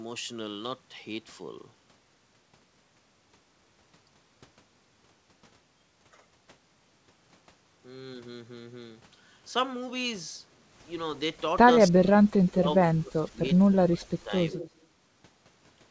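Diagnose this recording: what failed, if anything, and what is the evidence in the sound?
Speech suppressed in double talk, at the call-processing stage: the sound collapses by about 40 dB from 11.79 to 12.1 s, then dips repeatedly, up to about 25 dB, between 12.4 and 14.32 s. A spectrogram shows the energy gated out in blocks. Likely cause: an echo canceller attenuating during simultaneous talk.

Echo leak, also in call processing: from 14.51 to 14.7 s a faint copy trails the sound by 180 ms, about 20 dB down. The waveform shows a small repeated envelope, and the spectrogram shows a ghosted replica within the 8 kHz band. The likely cause is residual loudspeaker pickup passing the canceller.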